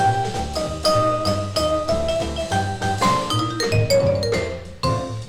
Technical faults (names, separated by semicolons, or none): none